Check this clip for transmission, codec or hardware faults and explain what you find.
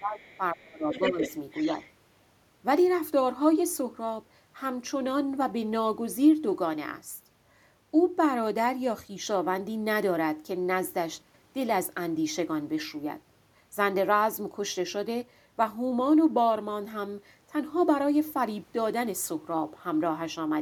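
Two echo-cancellation faults affect the opening two seconds of this speech clip.

From 0.00 to 1.31 s the talker's level sinks and recovers in patches, dropping as much as about 25 dB and losing around a second in total. This is speech suppressed in double talk, likely an echo canceller ducking everything while both sides spoke.

A second voice also intrudes. At 0.29 to 0.37 s it is a faint scrap, roughly 30 dB below the talker, and from 0.91 to 1.92 s it is a stronger stretch, only about 10 dB down. This is the other side's voice leaking through, likely loudspeaker playback the echo canceller failed to subtract from the microphone.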